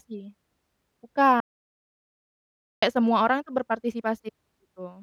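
At 1.40 s the speech cuts to dead silence with no room tone until 2.82 s. This audio dropout to silence was likely caused by a lost input.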